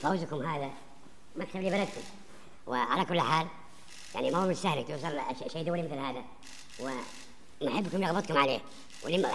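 From start to finish the clip has a wrong sample rate fault. Everything runs 1.5 times too fast and sits about 7 semitones too high, with speed and pitch rising together, which fits audio recorded at 16 kHz being played at 24 kHz without conversion. On a spectrogram every component shifts upward by that ratio, so the band edge moves from 8 kHz to 12 kHz. The waveform looks squeezed, with each event lasting two-thirds of its proper time.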